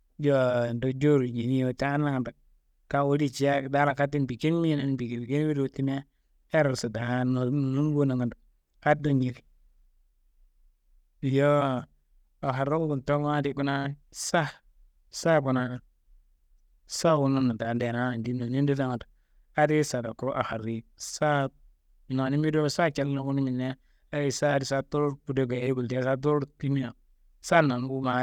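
No technical faults can be heard in this recording.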